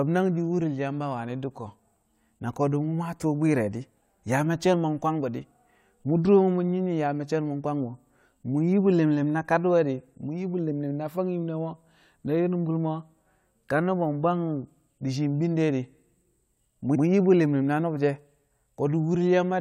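Repeated frames at 16.94 to 17.03 s break up this speech clip with a brief stutter. A block of about 93 ms of compressed audio was written twice, so the decoder plays that stretch and then immediately plays it again. The length fits a run of four compressed frames. Because the repeat is inserted rather than substituted, the speech lurches back a fraction of a second, and the clip runs about 93 ms longer than the original.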